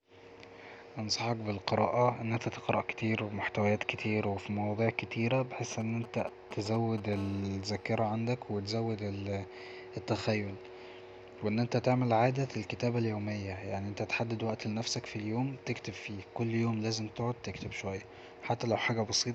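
A speech recording with GSM signalling bursts from 5.72 to 7.15 s: galloping clusters of brief 217 Hz buzzes, roughly 10 dB below the voice, from a nearby 2G phone's intermittent radio pulses being rectified. From 7.16 to 8.15 s a steady GSM phone buzz replaces the bursts. It is a continuous raspy 217 Hz tone rich in harmonics, about 20 dB down, as the phone transmits throughout a call.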